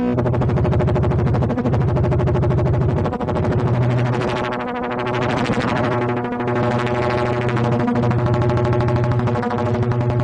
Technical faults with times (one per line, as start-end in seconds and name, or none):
none